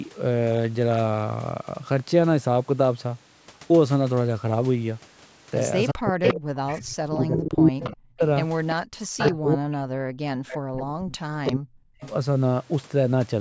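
The far side's echo canceller likely failed to remove what its loudspeaker fed back into its microphone, so an echo leak runs from 5.88 to 7.95 s. A copy of the speech returns 350 ms late, and at this point it is louder than the direct speech. Almost at once, from 5.93 to 8.22 s, the same processor likely treats both voices as echo and turns them down together. The result is speech suppressed in double talk. The talker's speech drops by roughly 40 dB at its deepest, close to silence, over about two seconds.

The pattern repeats. The echo leak returns from 8.7 to 9.35 s, again 350 ms behind but now a little below the speech. The double-talk suppression resumes from 8.84 to 12.02 s, cutting in just as deeply across about three seconds in total. A final echo leak from 10.51 to 12.11 s, still 350 ms late, sits well beneath the speech as a faint trailing copy. The call's microphone processing keeps the band below 8 kHz, which is normal.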